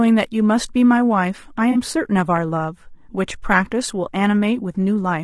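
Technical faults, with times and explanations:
Throughout: low-delay AAC compression. The speech sounds rough and grainy, with noise filling the gaps between harmonics and a thin, synthetic upper band. This is likely AAC-ELD at a low rate, around 32 kbps, where short frames resolve pitch poorly.
1.71 to 1.77 s: AAC frame loss with concealment. About 40 ms of audio, consistent with two lost frames, is replaced by the decoder's guess from the last good spectrum, giving a brief smeared, noisy, phasey patch before normal decoding resumes.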